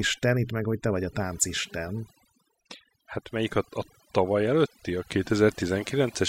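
Throughout the speech, its background is pulled down and broken up into twinkling specks that flicker in and out, and the softer edges of the voice seem to dissolve along with it. That is overdone noise removal: a noise reduction stage set too aggressively kept switching individual frequency bands far down or off whenever they came close to its noise estimate, taking quiet voice components with the noise.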